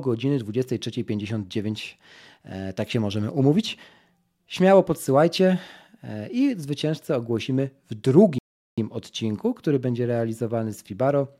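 At 8.38 s the speech stops dead. Silence follows until 8.78 s. That gap is a rebuffering stall. The player used up the audio it had downloaded and had to wait for more. Playback then picks up at exactly the point where it froze. No speech is skipped or repeated. The clip simply runs about 0.39 s longer than it should. To the ear it is a sudden, unnatural pause mid-flow.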